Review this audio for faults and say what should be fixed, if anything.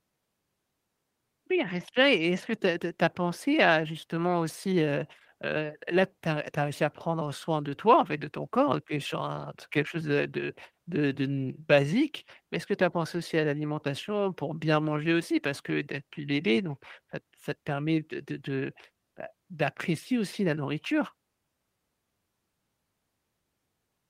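No faults can be heard anywhere in this speech recording. Nothing needs to be fixed.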